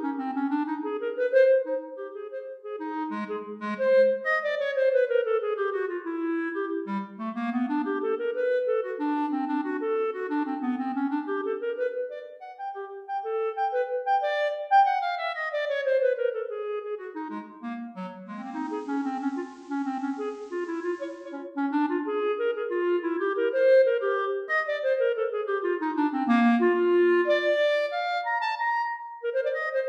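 At 18.25 s the digital radio blends to analogue FM over about 434 ms: faint hiss appears, then it returns at 21.50 s.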